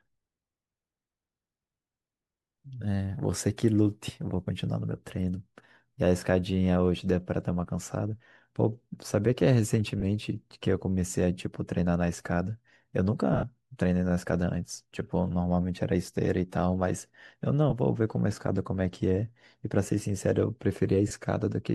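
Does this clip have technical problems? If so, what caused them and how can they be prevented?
Yes. Lost LE Audio frames cause brief dropouts at 10.00–10.03 s, 13.33–13.43 s, 17.70–17.73 s and 21.08–21.11 s. Gaps last 20–30 ms, but the 13.33 s one loses about 80 ms over 100 ms. The decoder fills each gap with a noisy smear, and the longest run, around 70 ms, fades. Stronger radio links and less interference would prevent this.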